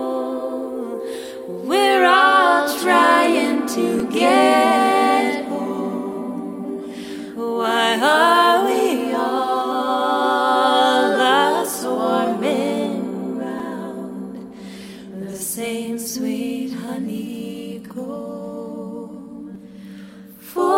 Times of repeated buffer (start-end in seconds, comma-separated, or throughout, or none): 4.00, 13.59, 19.55